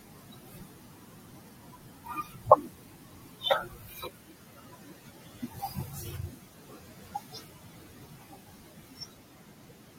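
A speech recording with noise suppressor artifacts throughout: the residual background sinks between words and rises under them as the suppressor gates bands frame by frame, unlike steady room noise, which sits about 14 dB below the speech. Speech cut by the noise suppressor runs from 0.0 to 3.45 s and from 3.61 to 9.98 s, with soft consonants and word endings swallowed by up to about 19 dB, touching nearly the whole clip. Unlike a level drop, it strikes quiet speech sounds selectively.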